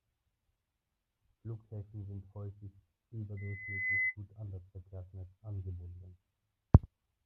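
Loudspeaker feedback squeal, 3.37 to 4.16 s: the microphone hears its own loudspeaker, and a 2 kHz tone swells in half a second above the speech.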